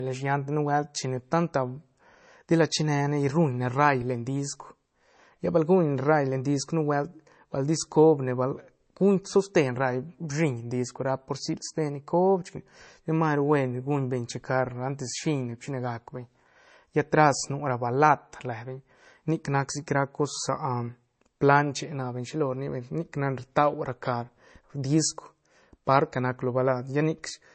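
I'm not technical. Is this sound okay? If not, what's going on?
No. The speech sounds dull throughout, with nothing above 8.3 kHz. This is likely low-bitrate audio saved at a high bitrate: a large file that still keeps the damage from an earlier heavy squeeze.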